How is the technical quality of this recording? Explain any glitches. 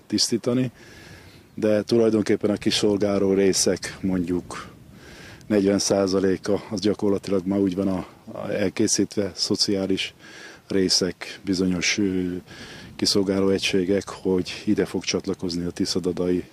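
The technical quality of this recording is good, and there are no glitches to explain.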